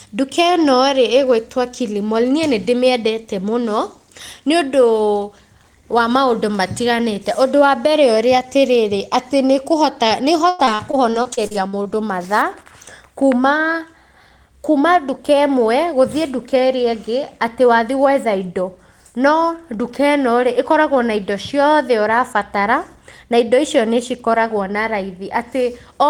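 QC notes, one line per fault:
10.49–11.87 s, repeated packet loss (robotic sound): right after "tarĩrĩ atĩ nĩ kũhota", eleven short gaps break the speech, the longest 94 ms. Each hole is patched by stretching the previous sound. About a quarter of the stretch is filled this way, so it turns choppy.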